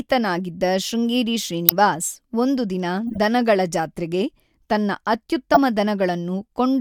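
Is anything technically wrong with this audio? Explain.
Yes. Corrupt frame decoded: flipped bits in compressed frames were decoded anyway, misplacing energy across frequencies. The result is brief chirps and noise bursts at 0.37–0.40 s (around -25 dBFS), 1.69–1.72 s (near full scale), 3.07–3.18 s (several frames long) and 5.54–5.58 s (near full scale).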